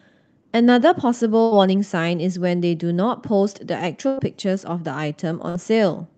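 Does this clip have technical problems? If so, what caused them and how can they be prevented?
Yes. The speech has three bursts of packet loss, at 1.43 to 1.53 s, 4.07 to 4.19 s and 5.49 to 5.56 s. Each time, packets arrived too late or not at all. The receiver stretched the last sound and faded it. Then speech resumed with 60 to 100 ms missing. A larger jitter buffer and forward error correction in the call codec, whose top end stops near 8 kHz, would help prevent this.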